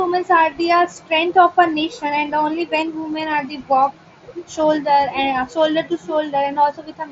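This speech clip has one brief case of concealed Bluetooth headset packet loss at 0.51 s. About 15 ms of audio went missing, which fits two lost packets. The phone filled the gap by repeating the closest-matching recent waveform. The sound itself is limited to 8 kHz with light grain, as expected from the mSBC headset codec.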